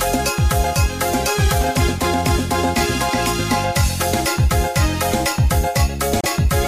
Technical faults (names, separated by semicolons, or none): damaged data in a compressed stream